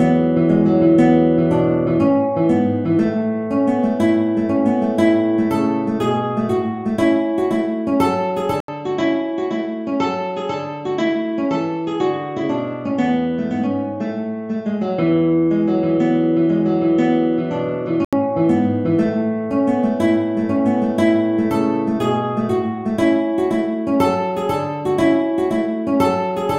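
At 8.60 s the recording most likely switched its input to a poorer device, which stays in use until 18.13 s. The changeover opens with a gap of about 80 ms, after which the audio drops a few decibels in level and loses everything above 7.6 kHz, so it sounds duller and boxed in. A faint new background noise sits well below the signal throughout that stretch, and the fuller tone returns at 18.13 s.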